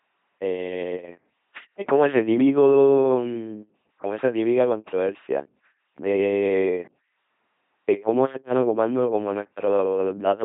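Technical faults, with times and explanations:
Throughout, LPC-10 vocoder: speech is rebuilt as either pulsed buzz or hiss, which fits 2.4 kbit/s, sounding harshly robotic with nothing above 3.8 kHz.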